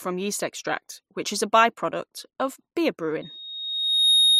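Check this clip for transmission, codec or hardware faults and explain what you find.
A loudspeaker feedback squeal begins at 3.22 s and runs to the end: a steady 3.7 kHz tone swells over about a second until it sits a few dB above the speech. The microphone is hearing its own loudspeaker, and at that frequency the loop gain exceeds one.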